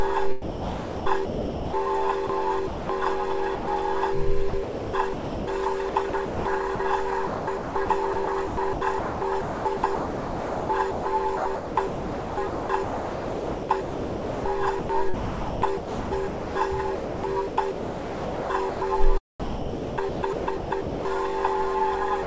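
From 0.42 to 1.73 s, the sender's voice detector likely kept switching transmission on and off. This is sound chopped by the voice detector. About 1.12 s of the audio is swapped for comfort noise, so the sound turns choppy. The same chopping likely recurs from 2.27 to 2.89 s, where about 0.24 s is replaced.

At 3.55 to 3.67 s, the detector likely judged the signal to be background and stopped sending, which is sound dropped by the voice detector. For 120 ms the audio gives way to steady comfort noise before returning.

From 4.49 to 18.81 s, the detector's gating is likely erratic again. Roughly 8.1 s of this long stretch is filled with comfort noise, leaving a persistently broken texture. From 19.40 to 21.05 s, the sound is likely chopped once more, with about 1.24 s replaced.

At 22.23 to 22.26 s, the detector likely cut transmission once more, so the final 31 ms drops into comfort noise. 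Throughout, the G.722 call path limits the audio to nothing above 8 kHz.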